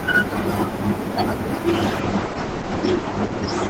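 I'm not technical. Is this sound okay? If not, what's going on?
No. From 1.68 s onward, a call bitrate drop starves the encoder of data, so the speech turns rough and muffled, losing its crispness.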